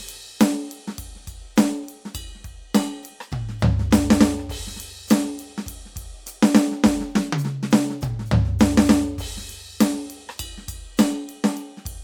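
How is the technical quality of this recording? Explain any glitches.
No technical faults are audible.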